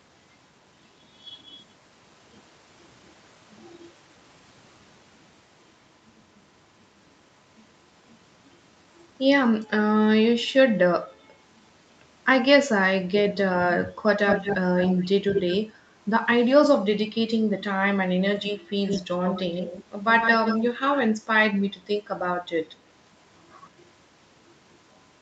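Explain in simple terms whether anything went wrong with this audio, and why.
Something went wrong on the call: most likely an echo leak, where one side's loudspeaker was picked up by its own microphone and the echo canceller failed to remove it. You hear a fainter, delayed copy of the speech trailing it, about 0.21 s behind at 14.27, 14.77 and 15.34 s, then about 0.15 s behind at 18.88, 19.21, 20.2 and 20.94 s. At 14.27, 15.34, 18.88 and 20.2 s that echo is nearly as loud as the speech itself.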